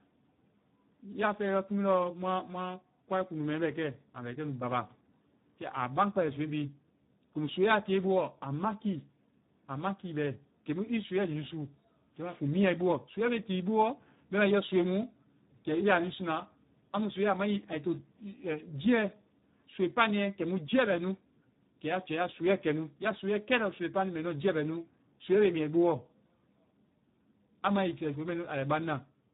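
Speex codec damage runs through the whole clip: the speech sounds noisy, hoarse and edging toward robotic, which fits a low 8 kbps setting starving the excitation of bits, and the band stops near 3.8 kHz, leaving a dull, narrowband top.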